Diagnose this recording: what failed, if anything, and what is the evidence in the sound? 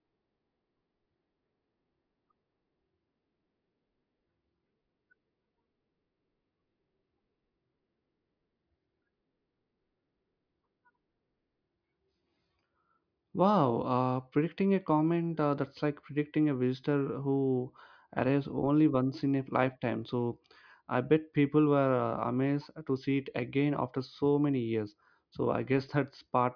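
Nothing failed: no stage between capture and playback leaves an audible defect anywhere in the speech.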